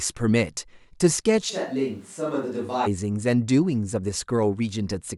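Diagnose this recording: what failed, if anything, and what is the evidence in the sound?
The close microphone's feed was likely lost at capture, so from 1.51 s to 2.85 s the recording switches to a distant microphone. Speech turns roomy, hollow and bass-light, drops about 10 dB, and room noise rises to roughly 35 dB below it, changing abruptly both ways.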